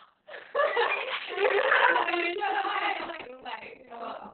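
Throughout the speech, heavy Opus voice compression is audible. The SILK coder has narrowed the band to 4 kHz, so a spectrogram shows a hard ceiling there. The coarse excitation coding makes the speech muffled, hoarse and slightly robotic, which fits a bitrate near 6 kbps.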